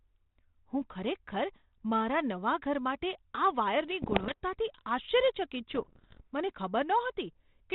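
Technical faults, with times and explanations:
4.02–4.42 s and 5.70–6.27 s, bit errors on an ADPCM link: bits in the 32 kbit/s G.726 stream were corrupted in transit, around 2% in the first burst and under 1% in the longer second one. Each flipped bit knocks the decoder's predictor and adaptive step size off track, so the damage rings on for several milliseconds. The result is pops, rough crackling bursts and brief jumps in level through the speech.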